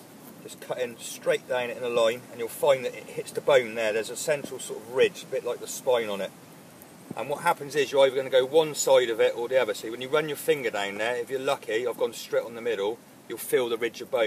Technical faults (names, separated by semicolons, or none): none